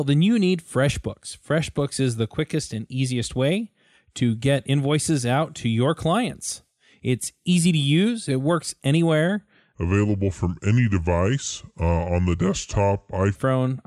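After "use it works anywhere", from 9.75 to 13.36 s, a section at the wrong speed plays at 0.75 times its recorded rate, likely from a mismatched clock. The speech sinks roughly five semitones and drags. Unlike a pure pitch shift, the timing slows along with the pitch.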